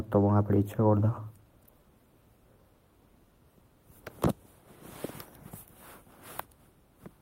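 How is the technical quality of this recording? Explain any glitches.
The recording has no audible glitches or technical faults.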